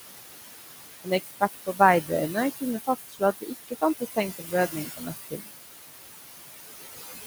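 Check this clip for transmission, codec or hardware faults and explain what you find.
Two faults are present, both from a noise suppressor working against room noise that sits only about 7 dB below the speech.

Noise suppressor artifacts run throughout the clip. The suppressor estimates the steady background in each frequency band and pulls it down by about 18 dB, frame by frame. The noise dips in the pauses and swells back under the speech.

Speech cut by the noise suppressor occurs at 1.04–1.8, 2.02–2.11, 2.83–3.22, 3.41–3.83, 3.99–4.18 and 4.38–5.56 s. In these spans the suppressor mistook quieter parts of the speech for noise and attenuated them by up to about 21 dB. Those parts sound swallowed or faint, with the most, about 700 ms, in the last span.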